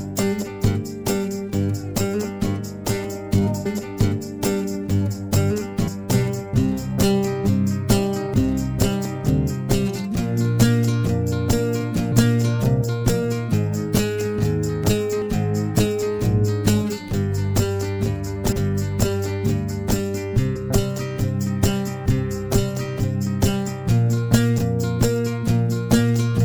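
Compressed frames skipped at 3.65, 5.87, 12.11, 18.51, 20.55 and 24.57 s: at each point the audio lurches forward, dropping roughly a fifth of a second in most places, closer to half a second at 18.51 s and under a tenth at 20.55 s. The jumps fit whole frames of about 26 ms going missing or being rejected by the decoder, and the overlap between frames turns each join into a short smeared blip, not a sharp click.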